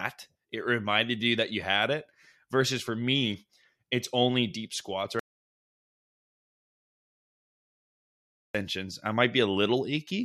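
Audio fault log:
5.19 to 8.55 s, audio dropout to silence: just after "it's only deep squats" the speech cuts off mid-flow and 3.35 s vanish, likely because the input was lost while zeros kept being written. Unlike a gate or fade, not even room tone remains.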